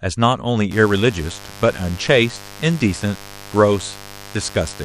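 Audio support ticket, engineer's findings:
Mains buzz, 0.71 s to end of clip. Steady raspy buzz under the speech, roughly 20 dB down. 50 Hz mains: spikes from a dimmer, rectifier or unshielded run, twice per cycle, harmonics into the kilohertz range. Check grounding and shielding.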